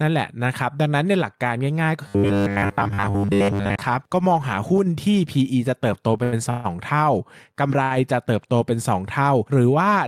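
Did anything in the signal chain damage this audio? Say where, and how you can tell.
Yes. From 2.08 to 3.82 s the speech turns into a rigid, metallic buzz at 100 Hz that only loosely tracks the speech. This is robotic sound from repeated short buffers, likely caused by a starved buffer at the driver or buffer stage: a 10 ms slice was replayed in place of most of the real audio in that span. On a spectrogram, evenly spaced harmonics at multiples of 100 Hz override the normal formant movement. The waveform shows identical 10 ms cycles.

There are three short stalls from late packets, at the network and jitter-buffer stage: 6.17–6.21 s (19 ms), 6.23–6.34 s (90 ms), and 7.84–7.92 s (68 ms). In each, a packet was late, so the receiver held the last sound until it arrived and then resumed from the same point, with nothing lost. You hear a sound dragged out with a slight buzz or dip. On a spectrogram the harmonics run flat and unchanged through the stall. 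The waveform shows a repeating, slightly decaying pattern.

From 6.50 to 6.66 s there is a call audio freeze, likely at the network stage. The sound stops progressing for about 0.14 s and is carried on as a fading buzz or hiss rather than dropping to silence. It then picks up exactly where it left off, so a gap is inserted and nothing is lost. The spectrogram shows a frozen spectral slice that dims over 141 ms before normal speech resumes. On the waveform this appears as a decaying, periodic stretch.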